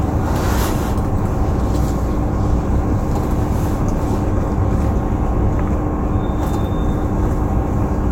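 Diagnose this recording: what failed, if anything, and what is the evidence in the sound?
Nothing in this recording of sounds points to a failure at any stage.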